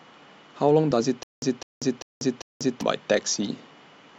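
From 1.23 to 2.81 s, a stutter with silent gaps: a 204 ms burst repeats four times between flat-line 191 ms blanks, likely a stalled stream.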